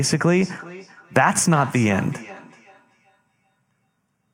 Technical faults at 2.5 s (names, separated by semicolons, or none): feedback echo between two devices